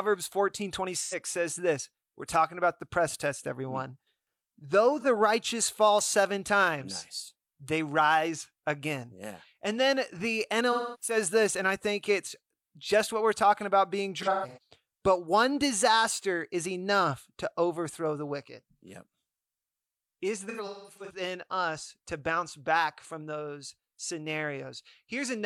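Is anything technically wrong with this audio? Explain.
Yes. The speech has AAC frame loss with concealment at 1.01, 5.00, 10.72, 14.21 and 20.48 s. The decoder rebuilt the missing frames from the last good spectrum. The short gaps, 85 ms before "says this" and 43 ms before "righteous fall seven times", sound smeared and phasey. The longer ones fade away before recovering: 0.3 s at 10.72 s, 256 ms spread over 0.34 s at 14.21 s, and 384 ms spread over 0.6 s before "us to bounce back".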